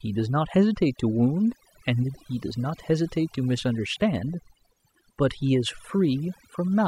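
Overdone noise removal runs throughout: the denoiser gates bands near its noise estimate, so the background drops to twinkly near-silence.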